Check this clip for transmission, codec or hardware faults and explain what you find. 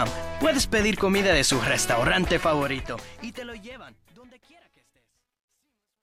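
One fault is present, on the fade-out that starts around 2.4 s. Truncation distortion on a fade runs from 2.41 s to 6.02 s. The volume stage discards low-order bits without dither, which fits roughly 12-bit resolution, so the shrinking waveform collapses into coarse square steps. From 4.32 s onward the tail turns gritty.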